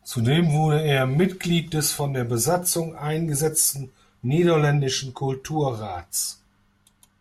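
Speech, with channel delay (comb filtering) from 3.78 s to the end: one channel lags about one sample, so mono summing cancels treble, leaving a dull sound with a notch near 20 kHz on the spectrogram.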